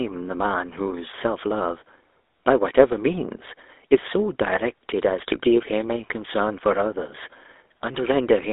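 GSM full-rate codec damage runs throughout the speech. The codec rebuilds speech from a vocal-tract model excited by sparse, regularly spaced pulses, leaving a plainly audible buzzy, gravelly roughness. The band is confined to roughly 300 Hz to 3.6 kHz, consistent with 13 kbps full-rate coding.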